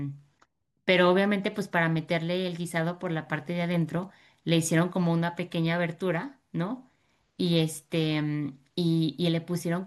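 No technical faults can be heard anywhere in the speech. There is nothing to place on the timeline.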